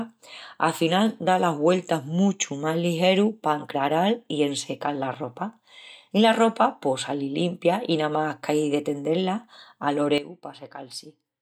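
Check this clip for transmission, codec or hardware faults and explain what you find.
One fault is audible: a sudden gain jump at 10.18 s that lasts to the end of the clip. The speech and the background noise drop together by about 12 dB from one sample to the next, with no fade. This is likely a gain setting or bit shift applied without a ramp. On a waveform the envelope steps down abruptly at 10.18 s. On a spectrogram every frequency band, noise floor included, darkens at once along a sharp vertical edge.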